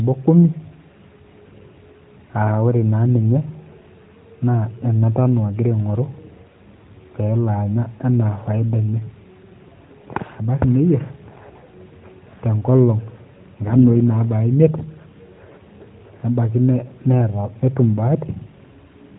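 Speech from start to finish, carried through a narrowband mobile path that cuts everything above 4 kHz. Between 13.68 and 13.87 s the voice briefly turns hoarse and gargly while keeping its pitch and level. These are AMR bit errors: flipped low-priority bits, roughly 5 percent, scatter the excitation pulses and skew gain and spectral detail across a stretch that fits about eight 20 ms frames. The light coding elsewhere fits AMR-NB at 12.2 kbps.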